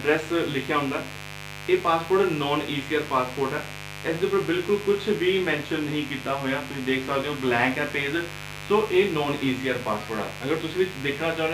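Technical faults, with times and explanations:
Throughout, mains buzz: a steady, raspy buzz sits about 15 dB below the sound, built on 50 Hz with harmonics reaching several kilohertz. Sharp switching spikes twice per mains cycle make it edgy and bright, unlike a smooth, low 50 Hz hum.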